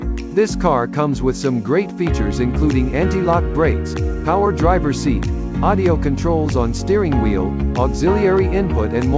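Nothing stood out on listening; the sound comes over a wideband call link whose band stops at about 8 kHz.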